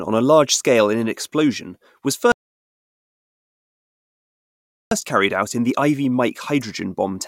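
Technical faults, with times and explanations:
2.32 to 4.91 s, rebuffering stall: the speech stops dead and the playback goes silent for about 2.6 s, then picks up at exactly the point where it broke off. The player had drained its store of downloaded audio and had nothing left to play, so it waited until fresh data arrived before continuing. No part of the speech is skipped or repeated; the gap simply inserts 2.6 s of dead air and pushes everything after it later.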